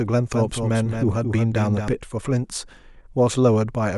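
From 0.34 s to 1.88 s the speech carries a doubled audio track: a full-band copy trails about a fifth of a second behind, somewhat quieter, likely from a second, slower capture path. It sounds like a dry, crisp slapback. A spectrogram shows every onset repeated, starting and stopping abruptly.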